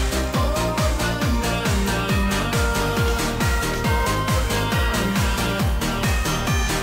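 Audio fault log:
4.01–6.82 s, feedback whistle: a thin, steady tone at 3.1 kHz enters and runs to the end of the clip, sitting about 25 dB below the main sound and swelling and fading slowly in level. This is likely a loudspeaker-to-microphone loop held just at the edge of feedback, sustaining one frequency without building up. A spectrogram shows a narrow horizontal line at 3.1 kHz from about 4.0 s onward. The waveform shows little beyond a faint thickening.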